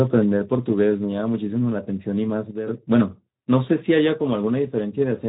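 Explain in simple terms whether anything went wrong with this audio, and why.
Two things went wrong. Throughout the clip, the speech has passed through the Speex codec at a low quality setting. The codec keeps too little detail, so voices sound rough and hoarse, and nothing above about 3.8 kHz survives, leaving it dull and muffled.

From 2.51 to 2.67 s there is a sudden gain jump. The speech and the background noise drop in loudness together, abruptly and without any fade, then return. This is likely a volume setting applied instantly instead of smoothly.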